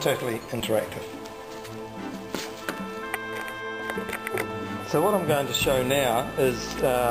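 There are three small skips in the sound, at 0.60 s, 2.14 s and 5.64 s, each a place where the audio jumps ahead with no gap. That's likely a dropped buffer (overrun), losing about 20 ms at the first spot and around 10 ms at the other two.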